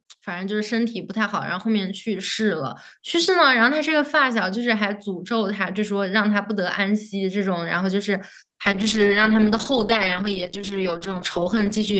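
From 0.24 s to 2.79 s the automatic gain is rising: the control judged the input too quiet and stepped its gain up by about 9 dB over roughly two and a half seconds, so the speech and the background swell together rather than the level settling at once.

At 8.66 s a call bitrate drop sets in and lasts to the end of the clip. The bandwidth estimate fell and the Opus encoder, already limited to 8 kHz on this call path, codes far more coarsely, leaving the speech rough and watery, which fits a fall from 40 kbps to about 9 kbps.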